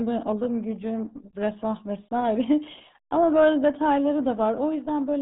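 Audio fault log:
throughout: RealAudio 14.4 codec. Speech sounds heavily muffled and gargly, with nothing above 3.8 kHz. This fits a crude 8 kbit/s dial-up speech codec.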